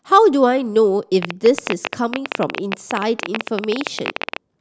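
From 1.2 s to 4.4 s the speech carries a train of clicks: short, near-identical pops arriving at about 15 per second, unevenly spaced, around fifty in total. They stand out to roughly 15 dB above the speech and continue through the pauses, so they are heard as a ragged ticking laid over the sound rather than as part of it. The likely cause is interference from nearby equipment or a faulty connection or power supply injecting pulses into the signal.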